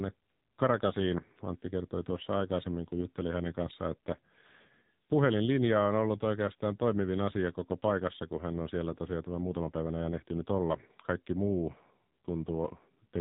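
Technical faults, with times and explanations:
Throughout: AMR narrowband mobile codec. Nothing above 3.8 kHz passes. The few-pulse vocal model makes speech buzzy and synthetic, fitting a bitrate near 6 kbps.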